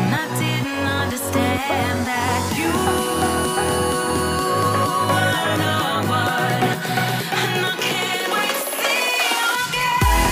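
Clock drift buffer slips run from 0.48 s to 9.92 s: a click recurs every 0.73 s, about fifteen times in all, at an interval steady enough to count along with. The likely cause is two devices running on separate clocks that disagree by a few hundred parts per million, so the buffer between them slowly drifts until a handful of samples is dropped or repeated, leaving a tiny discontinuity in the sound at each slip.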